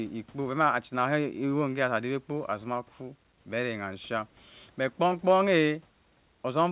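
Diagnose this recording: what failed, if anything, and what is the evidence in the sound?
Nothing stood out on listening to this speech recording.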